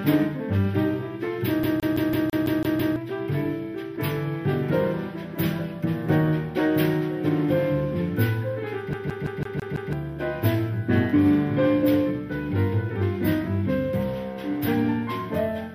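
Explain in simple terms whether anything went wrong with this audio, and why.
CD stuck on one turn, from 1.63 to 2.96 s and again from 8.93 to 9.93 s. A scratch keeps knocking the laser back one track at the same point on each spin, so the same slice of sound, about 0.17 s long, plays over and over with a tiny gap at every jump: eight times in the first stretch, six in the second. That gives the quick, even stutter of a skipping CD.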